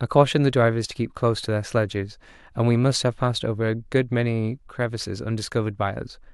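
Speech recording with no audible technical faults anywhere.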